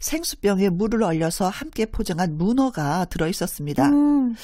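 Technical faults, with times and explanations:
No technical faults are audible anywhere in this speech recording.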